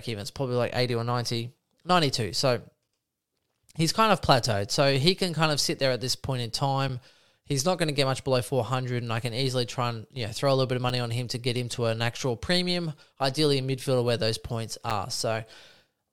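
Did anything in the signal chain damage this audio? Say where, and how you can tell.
Yes. Gaps between chunks, from storage or playback, cut this speech at 2.88, 6.89, 10.89 and 14.90 s, including just after "a little bit of". Each is a hard-edged hole of about 7 ms, repeating every 4.0 s, so silence fills each join.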